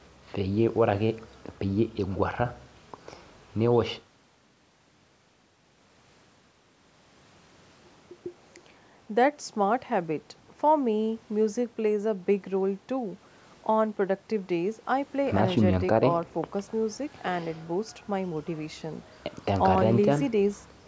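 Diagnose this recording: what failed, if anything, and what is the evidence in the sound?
Nothing failed in this speech recording; the sound shows only the normal call microphone processing, with its low bass trimmed and nothing above 8 kHz.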